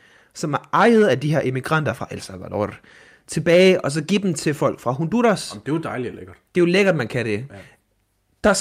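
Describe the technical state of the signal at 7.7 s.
At 7.7 s the speech signal is intact, with no technical fault audible at that moment.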